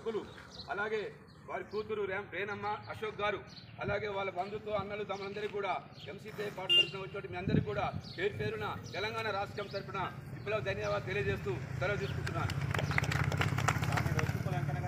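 Nothing in this audio stands out as a technical problem; it just runs along with no trouble to point at.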